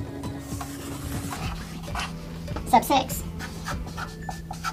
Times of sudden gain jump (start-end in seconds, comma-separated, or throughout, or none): none